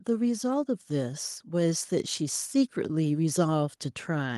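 From 0.05 to 3.05 s, automatic gain rising: the gain control judged the input too quiet and lifted it by about 7 dB. Speech and background swell together.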